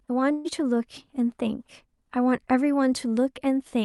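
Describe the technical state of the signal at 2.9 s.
At 2.9 s the speech is intact, with nothing audible beyond the normal character of the call codec it passed through.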